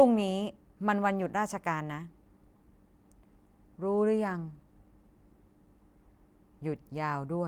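No technical faults can be heard at any point in the recording.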